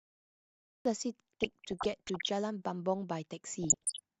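The speech kicks in abruptly at 0.85 s after digital silence, a cut-off start: the recording began late, so there's no natural attack. Then DAB burbling from 1.40 to 2.30 s and again from 3.63 to 3.99 s: weak reception let bit errors, around 0.5 and 0.7 percent, corrupt the MP2 data, giving short blips of noise in single sub-bands.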